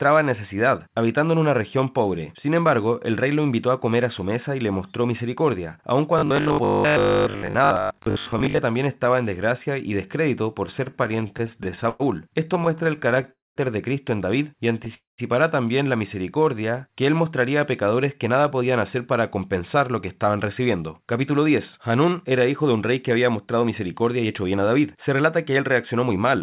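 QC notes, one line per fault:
6.19–8.59 s, robotic sound from repeated short buffers: after "le mostró misericordia aun", new audio was likely arriving too seldom, so the receiver kept filling the gaps by replaying very short stretches of what it already had, while much of the real signal was passed over. Those repeats stamp a fixed 50 Hz periodicity onto the sound, turning it into a rigid, metallic buzz that only loosely tracks the speech until "también estaba en desgracia".
10.66–12.02 s and 12.48–13.29 s, repeated stalls (stutter): packets kept arriving late, so the jitter buffer drained over and over, 20 times in the first span and 14 in the second. Each time the receiver stretched the last sound to cover the wait, about 296 ms and 129 ms in total, with gaps up to 104 ms in the first span and only about 13 ms in the second. Nothing is lost, but the speech drags and stutters.
13.31–13.58 s and 14.94–15.20 s, call audio freeze: packets were likely held up in transit, emptying the jitter buffer for about 244 ms and 236 ms. 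The receiver briefly continued the last sound, then faded to silence for about 190 ms and 160 ms. When packets arrived, speech resumed from exactly where it stopped, so each freeze inserts a pause and adds that much delay without removing anything.
16.15–16.88 s, jitter buffer slow-down: with its reserve running low, the receiver built it back up by repeating single pitch periods and bits of pause, adding about 76 ms. Between "también la" and "que él mostraría a" the speech runs at 91% speed with unchanged pitch, so sounds are drawn out.
18.29–26.37 s, jitter buffer speed-up: after "mostraría a pecadores que" the buffer held more audio than its target, so the receiver trimmed short pitch-period pieces again and again, removing around half a second overall. The speech plays at 107% speed at the same pitch and sounds hurried through to the end. The call path's G.711 mu-law coding, with nothing above 4 kHz, is audible as narrowband quality.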